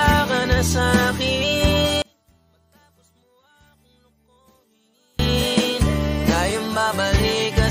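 From 2.02 to 5.19 s the summed sound drops by about 39 dB to a faint residue, likely one channel inverted; spectrogram and waveform nearly empty there.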